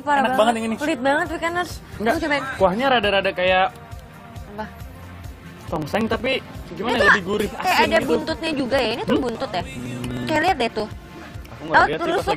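From 5.00 s to 12.31 s, periodic USB or driver dropouts skip roughly a millisecond of audio every 63 ms, producing a regular ticking wherever signal is present.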